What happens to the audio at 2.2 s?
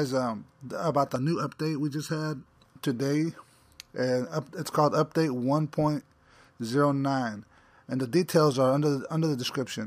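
At 2.2 s, channel delay causes comb filtering, from 1.16 to 2.46 s. One channel lags by under a millisecond before the mono sum, cancelling shared content at evenly spaced frequencies from around 700 Hz upward, so the sound turns hollow and phasey.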